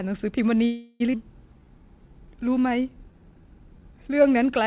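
From 0.66 to 1.02 s the speech stalls and a buzz- or hiss-like continuation of the last sound fills the 0.34 s hole before the talker resumes exactly where they left off. This is a call audio freeze, likely from packets held up in transit until the jitter buffer ran dry. It differs from a skip because nothing is lost; the gap is inserted.

The opposite happens at 1.12 to 1.15 s, a skip ahead. Roughly 0.3 s of speech is dropped and the two sides are butted together almost directly. That is an abrupt jump forward with almost no filler.

From 1.54 to 4.24 s a jitter buffer slow-down draws the speech out to 90% speed, adding 281 ms by repeating single pitch periods. The pitch stays put, which separates it from a tape-style slowdown. Stretched vowels carry through the narrowband call sound, which has nothing above 4 kHz.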